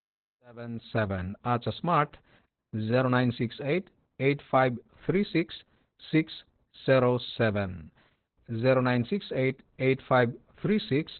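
Speech opens on a gentle fade-in from about half a second to 1.26 s, and throughout carries heavy Opus voice compression. It sounds muffled, hoarse and faintly robotic, consistent with narrowband SILK coding at around 8 kbps. A spectrogram would show a hard ceiling with nothing above 4.2 kHz.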